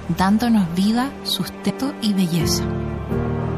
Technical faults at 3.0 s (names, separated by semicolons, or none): MP3 compression; compressed frames skipped